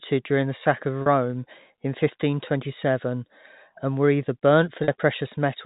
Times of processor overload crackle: none

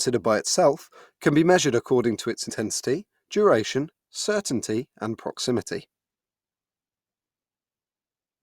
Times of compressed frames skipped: 2.49-2.52

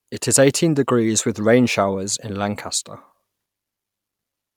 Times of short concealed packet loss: none

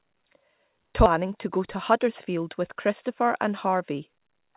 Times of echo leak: none

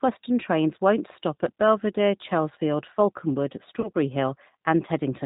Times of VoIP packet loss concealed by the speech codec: 3.81-3.89

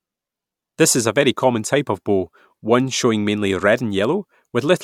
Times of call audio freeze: none

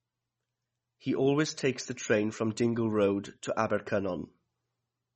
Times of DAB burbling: none

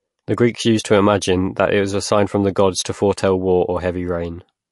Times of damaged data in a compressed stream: none

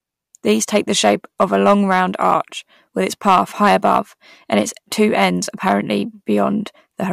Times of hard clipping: 0.50-2.35, 3.07-3.99, 5.67-5.75

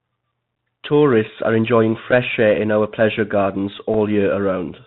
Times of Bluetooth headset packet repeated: 2.11-2.13, 3.94

